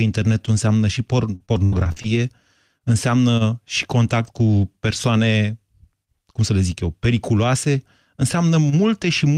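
Choppy, robotic speech runs from 1.35 s to 2.17 s, just after "înseamnă și". Half a dozen short holes break the sound, the longest about 82 ms. Each is bridged by a continuation of the preceding sound. This is repeated packet loss (robotic sound). Data arrived late or not at all several times in quick succession, and the decoder stretched the last good audio over each gap. About a quarter of that stretch, roughly 213 ms in total, is patched-in sound rather than the original.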